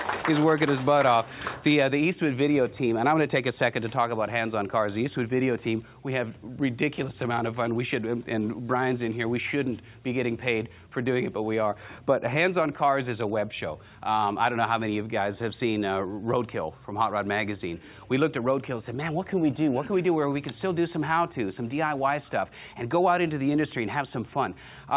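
No technical faults can be heard anywhere in the clip. It has come through a WebRTC call path, and the absence of anything above 4 kHz fits a narrowband telephone codec such as G.711 A-law.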